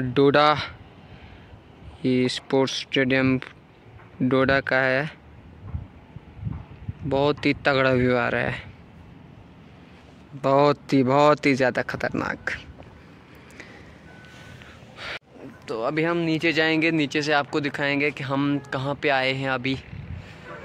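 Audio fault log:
No fault is found in the audio for this log.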